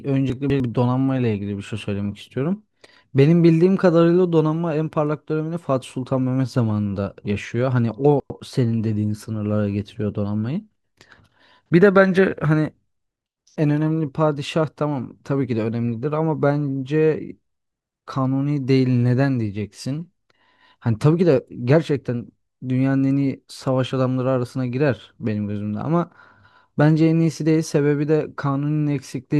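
At 0.3 to 0.6 s and again at 8.2 to 8.4 s the speech jumbles briefly: chunks out of order. A 100 ms chunk plays two slots late, then one slot late, leaving three hard joins each time.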